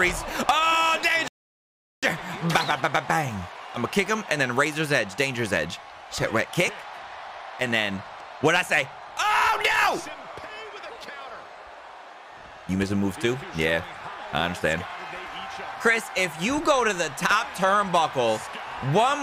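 The player ran out of downloaded audio, a rebuffering stall from 1.28 to 2.03 s, so the sound drops to silence for about 0.75 s, then resumes exactly where it stopped.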